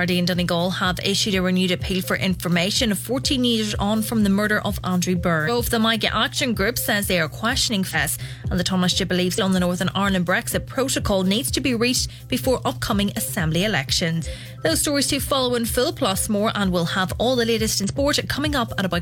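Damaged data in a compressed stream makes the decoder misread frames and lose sync, producing brief blips at 5.44–5.50, 7.90–7.95, 9.34–9.39, 14.21–14.27 and 17.84–17.89 s.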